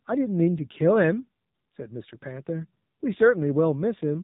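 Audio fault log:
Throughout: AMR narrowband mobile codec. Nothing above 4 kHz survives, so the speech sounds thin and boxed. The buzzy, synthetic edge fits a low rate near 7.4 kbps.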